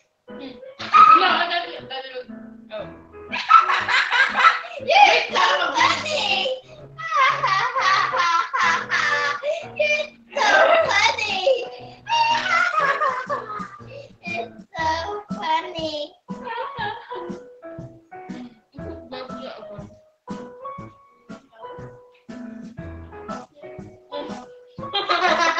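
A noise suppressor made for speech was left on for this non-speech audio, so level swings by roughly 5 dB as steady content is treated as noise: held sound sinks and tails shorten while attacks pass. On a waveform the envelope pumps; a spectrogram shows sustained bands fading between onsets. Sound cut by the noise suppressor is clearest at 0.00–0.29 s, 6.61–6.99 s, 10.08–10.36 s, 11.83–12.08 s, 13.74–14.74 s, 16.08–16.30 s, 17.98–18.76 s and 21.09–22.29 s, with drops reaching about 18 dB, visible as dark, hollowed gaps. The spectrum stops near 8 kHz, as expected through a call path.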